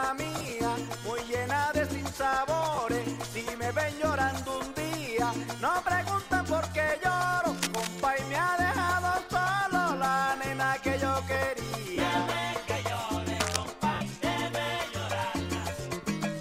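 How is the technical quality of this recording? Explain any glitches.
The recording has two recurring faults: dropouts and scratching. The light lossy compression is faint.

Lost LE Audio frames occur at 0.38 to 0.52 s, 2.75 to 2.78 s, 11.95 to 11.98 s and 13.94 to 14.01 s. The first loss is scattered over 140 ms. The decoder fills each gap by reusing the last spectrum, which smears the sound into brief noise.

Cable scratch noise appears at 7.55 to 8.02 s, about 5 dB below the signal, and at 13.40 to 13.56 s, near signal level. It is rough, uneven rustling, likely from a worn cable or connector being moved.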